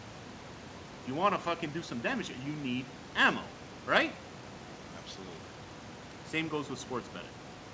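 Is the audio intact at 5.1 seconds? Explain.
Yes, the audio is intact at 5.1 seconds, with nothing there beyond the room noise sitting about 17 dB under the speech and the call codec's normal band limit at 8 kHz.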